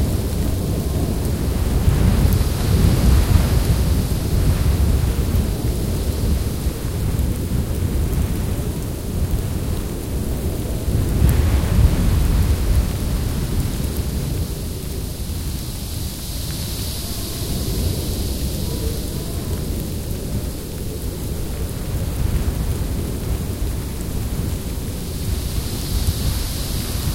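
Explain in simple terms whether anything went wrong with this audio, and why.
Nothing went wrong with this audio, because no fault can be heard anywhere in it.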